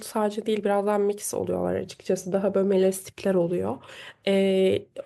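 No technical faults are audible.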